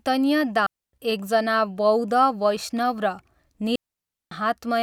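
Speech with two digital wireless dropouts, where the receiver lost too much of the radio data and muted the output. The first runs from 0.66 to 0.93 s, a hole of about 270 ms; the second, from 3.76 to 4.31 s, lasts about 560 ms. Each is a clean gap of near silence entered and left through a very short fade, with no hiss, crackle or burst of noise on either side, which is how a digital receiver mutes rather than letting corrupted data through.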